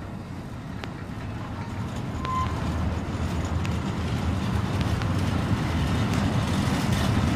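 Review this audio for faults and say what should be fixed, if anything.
Loud pops at 0.84–0.86, 2.25–2.49 (double), 3.66–3.68, 4.81–5.04 (double) and 6.14–6.16 s, roughly 15 dB above the sound, likely from voltage transients such as switching or connector glitches. Secure connections and avoid switching equipment during recording.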